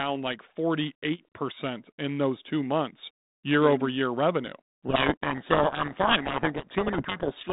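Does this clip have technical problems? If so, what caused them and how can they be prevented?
Yes. From 4.86 s to the end at 7.52 s there is a codec payload misread: the receiving decoder unpacks each G.726 code word with its bits in the opposite order. It rebuilds wrong differences, burying the speech under harsh distortion. Before this, the 32 kbit/s G.726 sound shows only light coding damage and is band-limited. Prevent it by negotiating and checking the G.726 packing order explicitly on both ends of the call.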